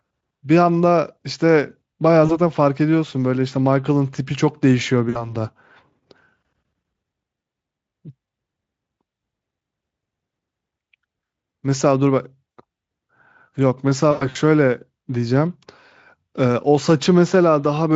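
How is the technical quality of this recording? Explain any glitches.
The recording has four brief dropouts, all from one cause. VoIP packet loss concealed by the speech codec occurs at 2.25–2.39 s, 5.09–5.34 s, 12.58 s and 14.11–14.37 s. About 40, 60, 60 and 160 ms of audio went missing; the last was scattered, with runs up to 100 ms. The decoder stretched its last pitch and filter while lowering the gain, so each gap sounds like a short, fading smear of buzzy tone or coloured noise, and the voice stays weak briefly afterward. The Speex coding adds only faint damage, which fits a fairly high-rate setting.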